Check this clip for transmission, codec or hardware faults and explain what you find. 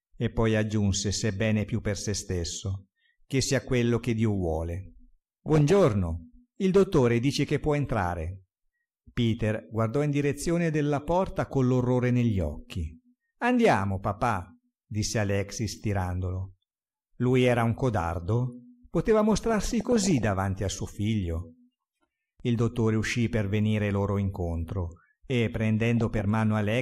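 DAB burbling occurs three times: 5.46–5.76 s, 19.31–20.24 s and 25.97–26.21 s. Weak reception let bit errors, somewhere below one percent, slip past error correction into the MP2 data. Corrupted samples put short blips of noise in single sub-bands, and corrupted scale factors make sub-bands jump in level for up to a frame, so the programme burbles. Unlike a dropout, burbling does not cut the sound out.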